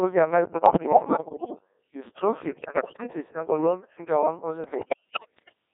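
Throughout, the speech carries the Codec 2 vocoder sound: buzzy and robotic, confined to roughly 250 Hz to 3.6 kHz, which fits a very low rate near 1.6 kbit/s. The decoder rebuilds the voice from sine waves, so a spectrogram shows neat, comb-like harmonics with no noise between them, and the waveform no longer matches natural speech.

Bit errors on digital voice radio strike from 0.52 to 1.55 s, 2.48 to 3.03 s and 4.64 to 5.53 s. Corrupted frame parameters make the voice leap in pitch and level and dissolve into warbles and bleeps. On a spectrogram, harmonics jump abruptly from one frame to the next. The final burst is the worst.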